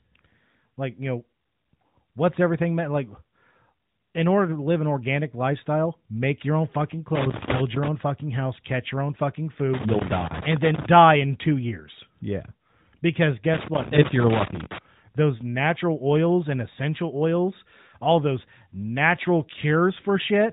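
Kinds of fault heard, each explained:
Loose connector crackle: a worn or dirty contact in the signal path kept making and breaking, chopping the signal. It produces an irregular burst of scratchy crackle from 7.15 to 7.88 s, between "make your own fucking" and "own fucking house catch".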